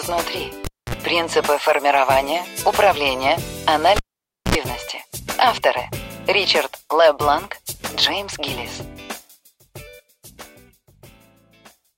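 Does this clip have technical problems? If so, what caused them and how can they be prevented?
Yes. A cable was pulled and plugged in at 0.65–0.95 s and 3.96–4.55 s. Each event pops, then drops to near silence for 252 and 537 ms. Next comes 51 and 67 ms of 60 Hz buzz as only the tip touches. A second pop follows. Mute before replugging.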